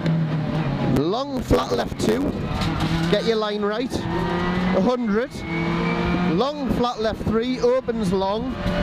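At 0.96 s, chunks play out of order. One 5.8 ms chunk arrives a chunk late, so the sound jumbles briefly with hard joins.

From 1.36 to 2.31 s, a block size mismatch truncates each block. A 91.9 Hz buzz appears, and the audio runs 1.07 times fast, which fits 512-sample written blocks.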